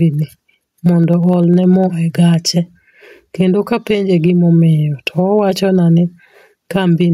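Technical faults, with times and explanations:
Throughout: gain pumping. The level rides up and down by about 10 dB with the loudness of the speech. Loud and quiet passages sit unnaturally close together and the speech sounds squashed. This is likely input gain set far too high, with a fast limiter or compressor clamping every peak.
0.14 to 1.94 s: periodic USB or driver dropouts. About twenty small ticks land at a steady 0.1 s spacing, ten per second, heard only while speech is present. At each tick a tiny sliver of audio, well under a millisecond, is skipped rather than filled, so the waveform jumps and clicks. The regular timing points to a background task on the USB bus or in the audio driver stalling the stream at a fixed interval.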